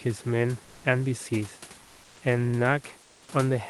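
From 0.64 to 0.84 s and 3.02 to 3.28 s, comfort noise replaces the background: the room hiss turns steady and featureless, about 3 dB quieter in the second gap. It is likely Opus discontinuous transmission, and unlike a dropout, the pause never falls silent.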